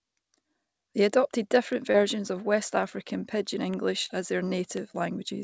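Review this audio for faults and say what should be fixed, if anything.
Bit error spikes at 1.73 s, at 3.74 s just before "as their", and at 4.77 s just after "as their". Each is one or two samples whose value jumped by a power of two and snapped back, giving a single sharp, broadband tick unrelated to the sound. Preventing them means adding error checking or ECC on the memory and digital links that carry the samples.

Short concealed packet loss at 1.92 to 1.96 s, about 20 ms missing, and at 4.06 to 4.11 s, about 40 ms missing just before "as their". The receiver extended the preceding sound to fill each gap, then blended back, leaving a brief smear. More jitter-buffer headroom or forward error correction on the link would stop these gaps from reaching the listener. The G.722 call path's band limit, with nothing above 8 kHz, is audible as a lack of top end.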